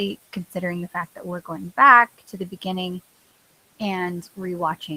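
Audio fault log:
Throughout, noise suppressor artifacts: the room noise, sitting about 18 dB below the speech, drops away in the pauses and swells back under the voice, as the suppressor pulls the bands it judges steady noise down by about 16 dB frame by frame.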